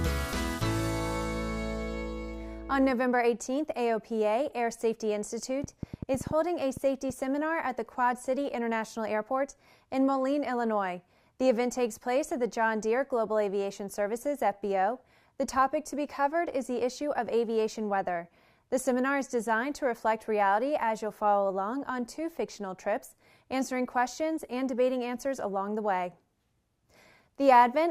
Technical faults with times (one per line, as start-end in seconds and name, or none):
5.64-7.11 train of clicks